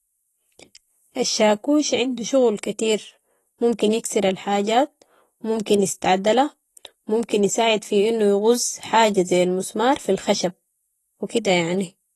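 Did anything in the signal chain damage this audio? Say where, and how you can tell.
Yes. The speech sounds dull and smeared throughout, with nothing above 12 kHz and a fizzy, warbling texture on sibilants. That points to the codec stage, likely AAC compression (AAC-LC) at a low bitrate, around 32 kbps, where the encoder lowers its cut-off and coarsely quantises the remaining bands.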